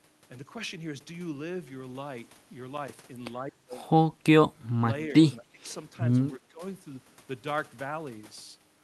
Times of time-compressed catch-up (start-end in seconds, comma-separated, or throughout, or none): none